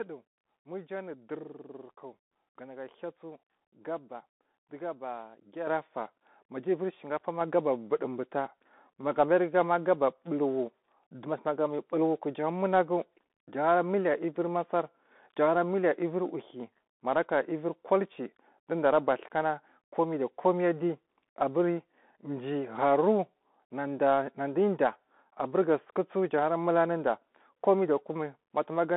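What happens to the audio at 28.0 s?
At 28.0 s you're hearing the Bluetooth CVSD headset codec, which runs through the whole clip. The one-bit delta coder can't track fast, loud high content, so the speech gets gritty, s sounds go scratchy, and there's grainy hiss underneath. The band is squeezed to roughly 200 Hz to 3.6 kHz, with nothing above 3.8 kHz.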